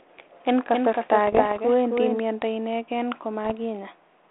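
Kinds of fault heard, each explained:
Doubled audio track: a second, slower capture path likely mixed in another copy, so a somewhat quieter, dry duplicate trails about a third of a second behind.
Bit errors on an ADPCM link: flipped bits upset the decoder's step size and prediction, producing pops and rough ringing bursts with brief level jumps.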